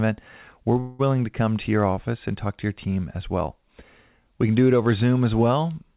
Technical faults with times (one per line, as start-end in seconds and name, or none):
0.80-1.01 call audio freeze